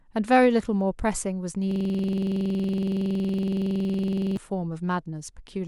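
From 1.71 to 4.37 s the speech turns into a rattling stutter, one 46 ms fragment repeating at 21.5 times per second. This is a system hang loop: the system froze while the hardware kept replaying its ring buffer, which fits a 2048-sample buffer.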